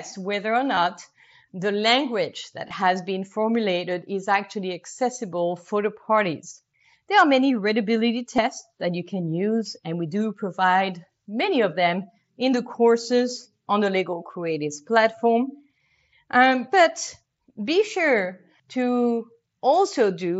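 Speech carried over a Bluetooth headset link, heard through the mSBC headset codec's 8 kHz band with its light grain, has three brief instances of concealed Bluetooth headset packet loss: at 0.75 s after "whether or", from 2.68 to 2.71 s between "the language that" and "has been formulated is", and at 8.37 s between "are many readability" and "that you can use". Each gap, about 15 ms, or 22.5 ms in the middle one, is filled by repeating a matched stretch of the preceding waveform. The result is a tiny held, buzzy smear with a faint warble on resumption, rather than the silence or click of an unconcealed dropout.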